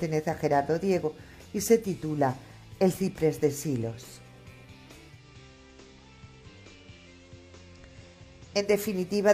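Digital radio blending to analogue runs from 5.05 to 8.77 s. The receiver lost its digital signal and cross-faded over 231 ms to the FM broadcast, so the level dips about 1 dB, and faint hiss sits well below the sound.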